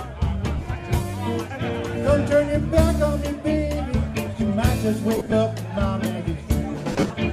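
The audio has lost LE Audio frames in three spots: 0.58–0.66 s, 5.16–5.32 s and 6.92–7.10 s, with the losses scattered in runs of up to a few tens of milliseconds. The LC3 decoder fills each gap by replaying the last spectrum with random signs, so tones smear into noise.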